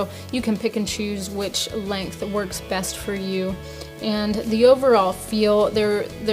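No technical faults can be heard anywhere in the clip.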